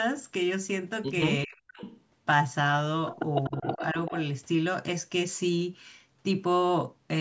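Between 1.46 and 1.82 s, an echo canceller likely faced both sides talking at once and, unable to separate this talker from its own loudspeaker echo, pulled the whole signal down. This is speech suppressed in double talk, and the sound dips sharply, by about 40 dB at its deepest. A second, milder instance runs from 3.49 to 3.96 s, with a drop of about 15 dB affecting roughly a fifth of a second in pieces.

Overlapping these, there is echo leak. The far end's canceller likely failed to remove all of what its microphone caught from its loudspeaker, so a delayed copy, 384 ms behind, was sent back. It surfaces at 1.79 to 2.01 s at about 20 dB below the speech, then at 3.43 to 3.86 s and 4.06 to 4.12 s at about 15 dB below, as faint repeats riding under the talker. The whole clip has passed through the call's microphone processing and carries nothing above 8 kHz.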